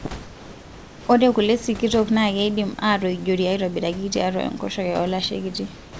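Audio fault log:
0.23 to 1.07 s and 5.75 to 6.00 s, comfort noise in place of the background: in both pauses the room background, roughly 21 to 22 dB below the speech, gives way to a steady, featureless hiss about 3 dB quieter. The detail of the real room noise disappears, likely because the sender stopped transmitting during silence and the receiver filled the gap with synthetic noise matched only to the background's rough spectrum and level. Like the rest of the call audio, it holds nothing above 8 kHz.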